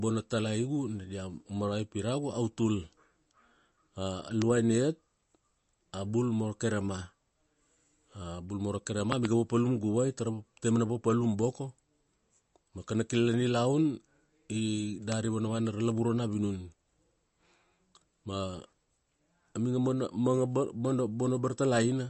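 Throughout the speech, nothing is heard above 8.1 kHz, and plainly audible MP3 compression adds a watery, swirling texture as weak frequency components drop in and out between frames. This likely comes from an encoder starved of bits, which fits a low bitrate near 40 kbps.

A loud pop lands at 4.42–4.44 s, standing roughly 20 dB above the speech. From 9.12 to 9.27 s, between "bul moro" and "papalum guvai", two pops follow in quick succession at a similar level. A softer pop, about 15 dB up, sits at 15.12–15.14 s. Each is likely a sudden electrical step or pulse, from a plug, switch, static or driver glitch, added on top while the speech continues underneath.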